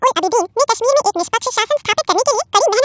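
Speech recorded at one sample rate is played back at double it with no conversion. That wrong sample rate runs the whole clip twice as fast and an octave higher, so it sounds squeaky and hurried. The sound points to audio captured at 8 kHz being played at 16 kHz.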